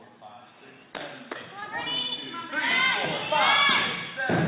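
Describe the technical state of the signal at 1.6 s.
At 1.60 s there's a short concealed packet loss, running to about 1.64 s. Roughly 20 ms of audio didn't reach the decoder in time, so the receiver patched the gap by extending the last bit of sound, either from its pitch or as shaped noise, and then blended back into the real signal. You hear it as a brief smear or wobble, sitting in a band that stops at 4 kHz, as G.711 mu-law does.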